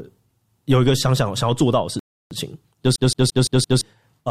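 At 1.99 s the speech drops abruptly into silence, holds there until 2.31 s, and then carries on from exactly the point where it broke off, with nothing skipped. That gap of about 316 ms is a rebuffering stall: the player used up the audio it had already downloaded and had to wait for more data before continuing, so the pause adds time to the clip without removing any of the sound.

From 2.96 s to 3.81 s a quick, regular stutter takes over, with one short fragment of speech about 171 ms long played five times in a row and a brief mute at each restart. This is the CD stuck on one turn fault, where a scratch knocks the laser back a track at the same point on each rotation of the disc, forcing that slice of audio to repeat at an even rate.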